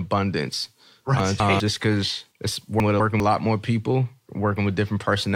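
Chunks out of order: a 200 ms block of audio was delivered one chunk late, so it swaps places with its neighbour. From 1.2 to 1.6 s, just before "because it's", and again from 2.8 to 3.2 s, just before "lot more people", the speech jumbles briefly.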